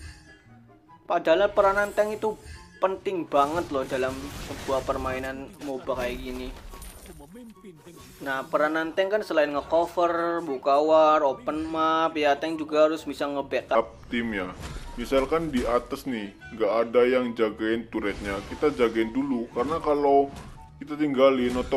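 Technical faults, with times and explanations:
13.75 to 21.76 s, section at the wrong speed: from 13.75 s onward the audio plays at 0.8 times its proper rate, dragging and dropping about four semitones, likely from playback against a mismatched clock. A spectrogram shows every harmonic stepping down together; waveform features stretch wider.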